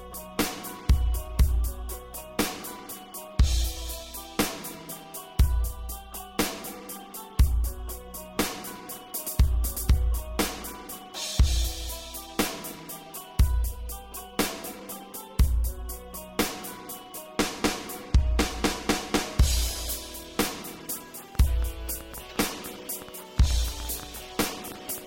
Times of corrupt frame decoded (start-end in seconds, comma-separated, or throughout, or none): none